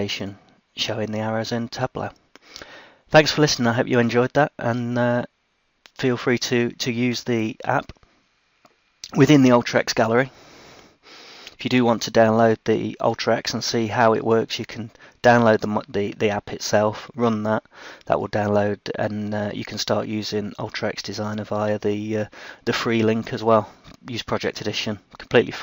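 Nothing stood out on listening; no part of the audio drew attention as faulty at any point.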